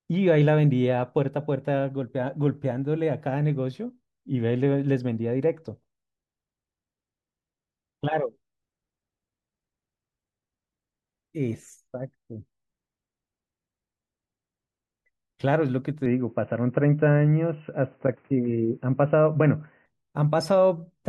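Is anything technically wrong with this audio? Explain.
Yes. An input switched to a poorer device from 16.06 to 19.86 s: the recording likely moved to a narrower-band microphone path, so nothing above 3 kHz survives. The speech turns dull and boxy with no gap or level jump, and a faint new noise sits well beneath it.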